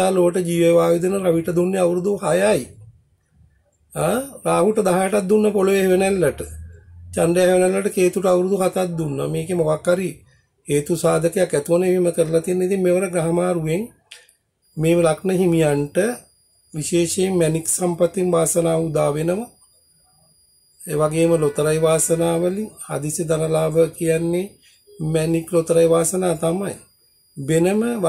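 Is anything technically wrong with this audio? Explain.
No, nothing technically wrong turns up on listening, so there are no faults to report.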